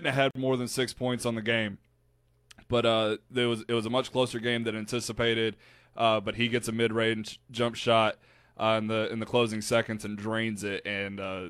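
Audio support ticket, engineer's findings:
Gap at a join of encoded pieces, 0.31–0.35 s, between "have had" and "more than six points". About 46 ms of dropout, then sound resumes where it stopped. Waveform: flat-line hole with smeared edges. Spectrogram: full-band blank column. Probable component: concatenation of separately encoded segments with untrimmed encoder delay and final-frame padding.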